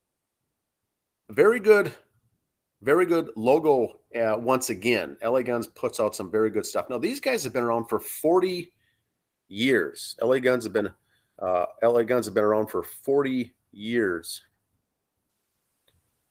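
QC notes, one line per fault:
No faults are heard in this speech. The Opus voice compression keeps the full band with only light coding damage, which fits a hybrid mode at a bitrate around 20 kbps.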